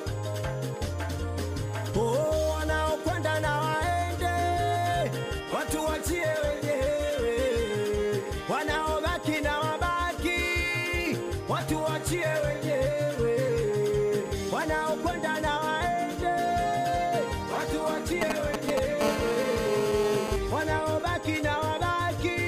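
GSM signalling bursts appear from 18.22 to 19.03 s. A nearby 2G phone is sending brief groups of radio pulses while it signals to the network. The audio circuit rectifies them into a galloping dit-dit-dit of short 217 Hz buzzes, roughly as loud as the sound itself.

GSM phone buzz follows directly, from 19.03 to 20.36 s. The phone has moved into a call and transmits continuously in 217 Hz bursts, which the circuitry again demodulates. The result is a steady, raspy, harmonic-rich buzz at about 5 dB below the sound, unrelated to it.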